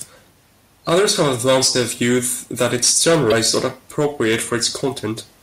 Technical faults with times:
3.28-3.32 damaged data in a compressed stream

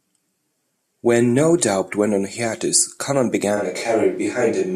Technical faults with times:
3.58-4.76 switch to a distant microphone

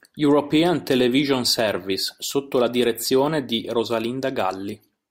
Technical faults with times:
none

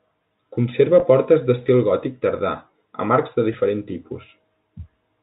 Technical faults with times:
1.00-1.02 packet loss with pitch repetition
3.53 packet loss with pitch repetition

